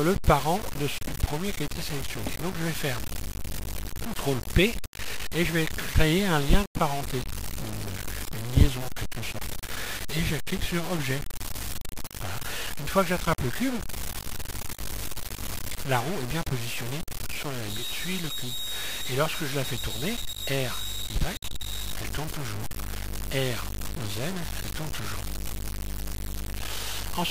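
From start to finish the audio carries a coarse, grainy distortion that tracks the signal, which points to a likely cause of low bit depth without dither, consistent with a word length of around 5 bits truncated rather than rounded. With so few levels available, the quantisation error sits only slightly below the sound itself and moves with it, so quiet passages turn harsh and gritty and the faintest detail collapses into sputtering or silence.

From 17.63 s to 21.98 s a thin, steady tone at 3.8 kHz rides behind the material, about 15 dB below it, slowly swelling and fading in level. This is a feedback whistle, likely from a loudspeaker-to-microphone loop sitting just at the edge of instability. One frequency keeps ringing at a constant pitch without building into a full howl, then it stops.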